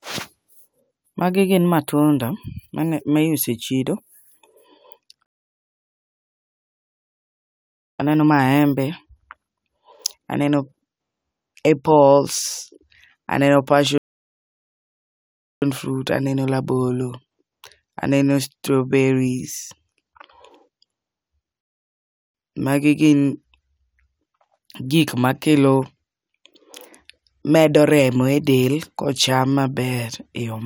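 The speech drops into dead silence three times and then picks up exactly where it stopped: from 5.26 to 7.99 s, a 2.73 s gap, before "aneno maembe"; from 13.98 to 15.62 s, 1.64 s, before "fruits aneno rabolo"; and from 21.61 to 22.34 s, 0.73 s. These are rebuffering stalls. Playback used up its downloaded audio and paused until more arrived. Nothing is skipped, but each stall adds its length to the running time.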